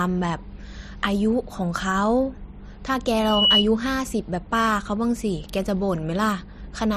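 Loudspeaker feedback squeal, 3.15 to 3.67 s: the microphone picks up its own loudspeaker, and a 2.9 kHz tone swells over roughly a third of a second to about 10 dB above the speech.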